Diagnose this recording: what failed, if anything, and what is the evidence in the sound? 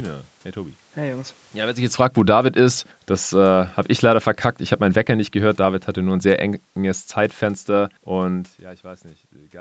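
Automatic gain falling, in the call processing stage. The level sags from 1.55 to 2.47 s by about 10 dB, again from 3.1 to 4.28 s and from 4.81 to 8.49 s by about 6 dB each. The AGC judged the speech too hot and eased its gain down, so the room noise sinks along with the voice.

Automatic gain rising, same call processing stage. Between 2.25 and 2.98 s the speech and background swell together by about 6 dB. The AGC decided the input was too quiet and slowly wound its gain back up.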